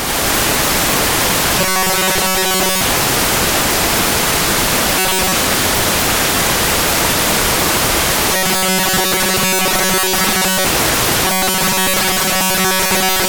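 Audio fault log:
1.59–2.81 s, 4.99–5.35 s, 8.33–10.66 s and 11.25 s to the end: robotic sound from repeated short buffers. The sound turns into a rigid, metallic buzz pinned at 188 Hz while its outline still moves underneath. This is likely audio arriving too slowly, with roughly 5.3 ms chunks looped to fill the gaps and most of the real signal skipped. Unlike a steady hum, the buzz comes and goes with these stretches and carries the sound's shape.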